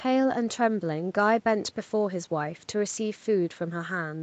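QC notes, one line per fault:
No faults found in the speech. It has been through a call's microphone processing, which trims the lowest bass and leaves nothing above 8 kHz, as that path normally does.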